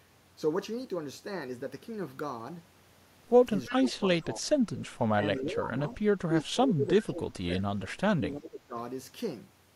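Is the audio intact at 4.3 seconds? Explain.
No. Speech suppressed in double talk runs from 3.69 to 4.49 s, so 4.3 s falls inside it. The likely cause is an echo canceller that, with both ends talking at once, could not tell the near talker from loudspeaker echo and attenuated everything. The speech sinks noticeably, at its deepest by roughly 20 dB, and the suppression covers around seven tenths of a second within that span before level returns.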